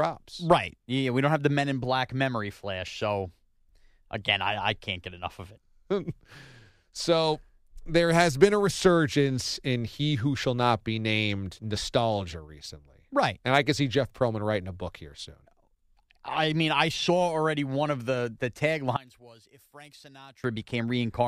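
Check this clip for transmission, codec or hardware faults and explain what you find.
One fault is present, near the end. From 18.96 s to 20.44 s, just after "one of the the", the speech suddenly falls away by about 23 dB and turns faint, with the centred body of the voice almost gone. The likely cause is one channel inverted: with one stereo side's polarity reversed, the shared centre content cancels when the channels are summed to mono, leaving only the small difference between them.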